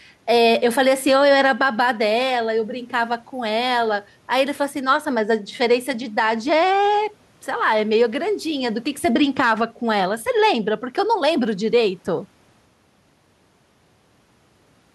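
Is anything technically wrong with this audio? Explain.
Yes. Gain pumping runs through the whole speech clip, with the level swinging by around 5 dB. The background is room noise sitting about 41 dB below the speech. Loud and soft passages end up squashed closer together. The likely cause is input gain set far too high, with a fast limiter or compressor clamping it on every peak. A noise gate would do the opposite, dropping the background away in the gaps rather than raising it.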